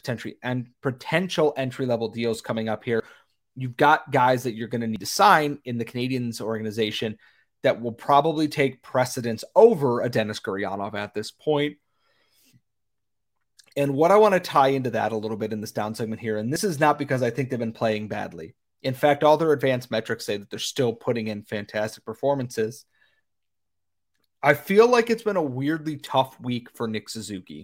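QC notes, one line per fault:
3.0 s, dropped buffer (overrun): The recording side likely failed to read a buffer before it was overwritten. About 40 ms of audio is gone, and the two sides are butted together, so a small jump follows "level deals coming up" with no gap of silence.
4.96 s, dropped buffer (overrun): This is likely the same missed read, this time losing around 70 ms. The join between "that you're going to" and "to sign in the" is abrupt.
16.56 s, dropped buffer (overrun): A buffer was likely overwritten before collection again, with about 40 ms lost. The audio leaps straight from "down segment here and" to "is not because I", and the direct splice leaves no pause.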